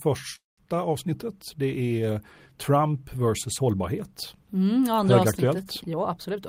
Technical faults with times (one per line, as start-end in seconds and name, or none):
0.35-0.59 call audio freeze
5.93-6.37 jitter buffer speed-up